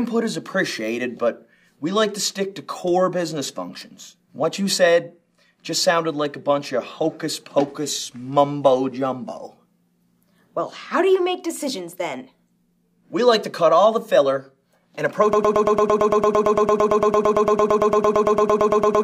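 A broken-record loop starts at 15.33 s and runs to the end of the clip. A fragment of about 0.11 s repeats exactly, back to back, 33 times, giving a stuttering, machine-like buzz in place of any forward motion. The likely cause is a stall in the player, encoder or stream, which kept sending the last piece of audio it held. Whatever should have played in those final 3.7 seconds is lost.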